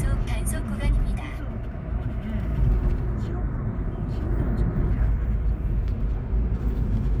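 Nothing technically wrong can be heard in this recording of sounds; the signal stays intact and continuous throughout.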